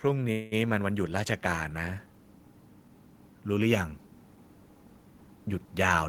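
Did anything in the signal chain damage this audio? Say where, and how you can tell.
Yes. Call processing applied an automatic gain rising. From 0.05 s to 2.08 s the speech and the background swell together by about 4 dB. The level climbs slowly over two seconds, so it is the gain stage reacting to a quiet input.

The network stage likely caused a long network dropout from 0.31 s to 0.54 s. The speech gives way to a fading continuation of the last sound for about 0.2 s. When speech resumes, that stretch is simply gone.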